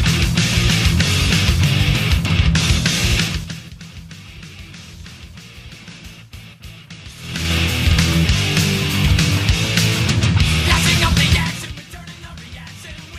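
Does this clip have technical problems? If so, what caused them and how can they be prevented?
Yes. Zipper noise occurs from 3.16 to 3.72 s and from 11.33 to 11.80 s. Each time the level drops about 20 dB in unsmoothed steps of about 3 dB, roughly fifteen per second. Each jump ticks audibly and shows as a staircase envelope in the waveform and faint vertical clicks on a spectrogram. Ramping gain per sample, or smoothing it between buffers, prevents it.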